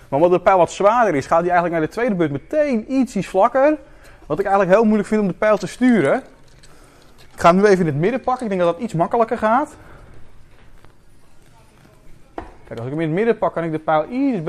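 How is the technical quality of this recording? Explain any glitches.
No glitches turn up anywhere in this recording, and nothing technical calls for explanation.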